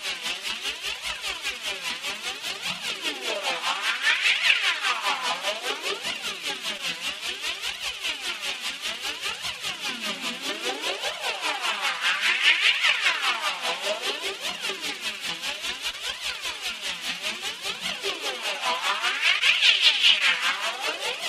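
Four brief smears break the sound, at 6.77–6.81 s, 15.91–15.95 s, 19.39–19.43 s and 20.19–20.22 s, each a short wobble where the texture briefly blurs before settling. This is short concealed packet loss. Each time, about 20 ms of audio, consistent with one packet, arrived too late to decode. The receiver bridged the gap by extending the preceding sound for 12, 23, 17 and 15 ms respectively, then crossfaded back into the real signal.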